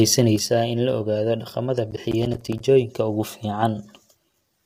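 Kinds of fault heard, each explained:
Low-delay AAC compression: the speech sounds rough and grainy throughout, likely from AAC-ELD at 32 kbps; a spectrogram shows smeared harmonics with noise filling between them.
One channel drops out: from 0.36 s to the end, the level falls abruptly by about 6 dB, likely one stereo channel lost; the waveform envelope steps down there.
Processor overload crackle: from 1.91 to 2.60 s, missed buffers of roughly 10 ms leave many silent gaps, heard as crackle; the waveform shows a dense run of hard-edged dropouts.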